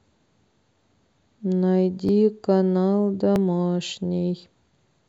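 From 0.81 s to 4.64 s the speech picks up a click about every 1.27 s, four in all. These sound like clock drift buffer slips: two devices likely running about a thousand parts per million apart, so the buffer periodically drops or repeats a chunk of around fifty samples.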